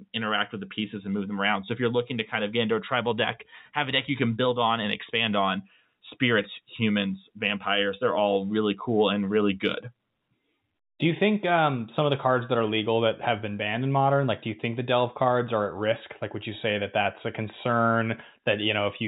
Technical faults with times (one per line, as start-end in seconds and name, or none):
none